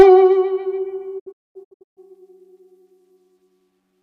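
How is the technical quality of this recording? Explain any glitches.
Two faults affect this music recording: brief clipping at the very start and a broken-up dropout about a second later.

Hard clipping occurs from 0.00 to 0.03 s. The opening peaks exceed what the signal path can pass by about 4 dB and are sliced flat, producing a short crackle. Soft saturation would round the peaks and thicken the tone, but these flat tops add a sudden, brittle edge.

A digital broadcast dropout runs from 1.18 to 1.99 s. The receiver lost valid data and muted until good frames returned. About 544 ms of music disappears in several holes spread over roughly 0.77 s, the longest lasting 224 ms, which points to a number of lost frames. Each hole fades out over about 20 ms instead of clicking off, which sets it apart from a buffer underrun.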